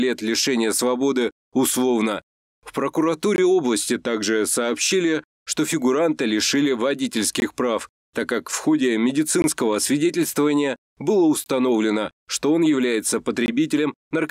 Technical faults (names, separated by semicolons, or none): gap between chunks